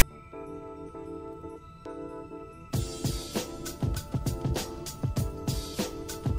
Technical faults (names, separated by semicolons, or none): file tags played as audio